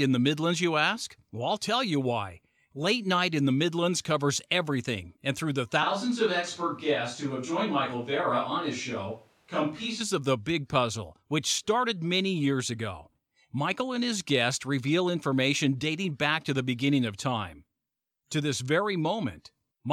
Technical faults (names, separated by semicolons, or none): switch to a distant microphone